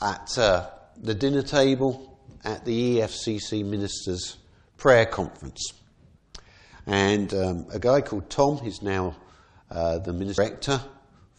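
Damaged data in the compressed stream at 10.37 s: corrupted bytes make the decoder misread a frame and lose sync, producing a brief blip.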